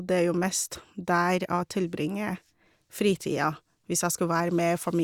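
Speech recording; no technical faults can be heard.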